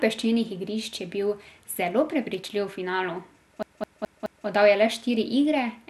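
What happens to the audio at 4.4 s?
At 4.4 s the audio is in the last stretch of a CD stuck on one turn, running from 3.63 s to 4.47 s. A scratch keeps throwing the pickup back to the same spot, so a slice of about 0.21 s is played over and over, four times in all, with a brief mute at every jump. It sounds like a rapid, even stutter. On the waveform the same envelope shape repeats at 0.21 s intervals, each separated by a tiny gap; the spectrogram shows identical blocks tiled side by side.

Across this moment the sound is also dull and gurgling, with a granular roughness, which is plain audible codec damage, likely from MP2 compression at a rate that fits roughly 80 kbps. Starved of bits, the encoder switches off its upper sub-bands and coarsely quantises the remaining ones. On a spectrogram the energy stops sharply at 12.2 kHz, and just beneath that edge patches blink on and off in blocky steps.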